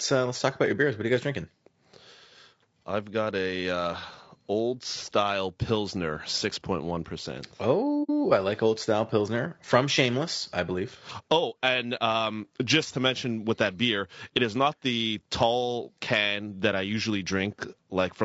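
Throughout the speech, a low-delay AAC coder, likely AAC-ELD at a low rate around 32 kbps, codes the signal in short low-delay frames with too few bits, so the voice sounds plainly rough and grainy, with noise filling gaps between harmonics.

From 8.03 to 8.11 s, just before "I like", there is AAC frame loss with muting: the decoder zeroed the missing spectrum, about 60 ms, which fits two lost frames. Overlapping windows fade the sound out and back in, leaving a soft-edged gap.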